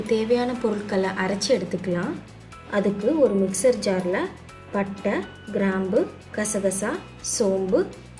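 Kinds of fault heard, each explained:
No technical faults can be heard in this audio. There is nothing to list for this clip.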